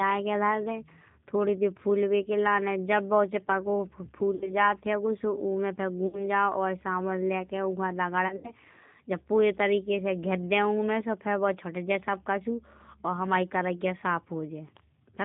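Speech, carried throughout by the G.729 codec at 8 kbit/s. Its damage is plainly audible. Nothing above 4 kHz survives, and the voice sounds slightly rough and synthetic. The decoder rebuilds each 10 ms frame from a vocal tract filter, a pitch predictor and a few pulses. There is VoIP packet loss concealed by the speech codec three times. From 4.35 to 4.57 s, just before "हैगो सो उमे से", about 60 ms is missing. From 6.07 to 6.25 s, just after "हैगो सो उमे से", another 60 ms goes. From 8.28 to 8.52 s, before "जब पूरे तरीके से", 100 ms is lost in gaps over 160 ms, the longest 80 ms. Each gap turns into a buzzy tone or coloured noise and fades as the decoder stretches its last pitch and filter. The voice stays weak briefly after.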